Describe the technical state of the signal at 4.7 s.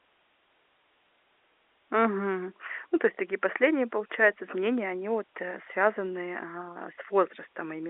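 At 4.7 s the speech is intact, carried cleanly over the telephone-band G.711 coding with no fault at that moment.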